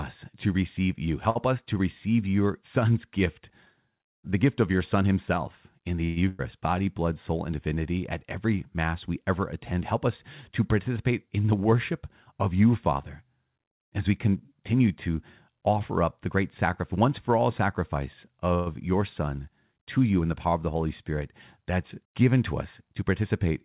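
Speech carried over a call link with nothing above 4 kHz, consistent with narrowband G.711 mu-law coding, shows several transport faults. At 1.30 s a late packet left the jitter buffer empty, causing a short stall: the current sound is held about 53 ms too long before continuing, with nothing lost. Packets were likely delayed in transit at 6.04 to 6.18 s and again at 18.55 to 18.68 s, producing a call audio freeze: the last sound is stretched into a fading buzz or hiss for about 120 ms and 114 ms, then speech resumes intact. Just after the first freeze, at 6.28 to 6.41 s, a burst of packet loss drops about 100 ms of audio, which is bridged by a decaying continuation of the last sound before playback jumps ahead. To shed the built-up delay, the receiver applies a jitter buffer speed-up at 11.10 to 12.49 s, 14.18 to 15.08 s and 22.82 to 23.22 s, removing roughly 100 ms, 70 ms and 40 ms of pitch periods, so the speech runs about 7% fast at unchanged pitch and sounds hurried.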